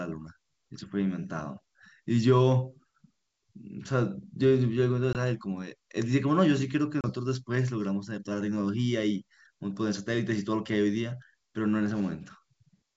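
At 5.13 s and again at 7.01 s the speech drops into a hard-edged silent gap, about 20 ms and then 30 ms long, before returning slightly distorted. This is packet loss on an ADPCM call, likely a few lost packets each time: the G.722 decoder's predictor and step size drift from the sender's and take tens of milliseconds to resettle.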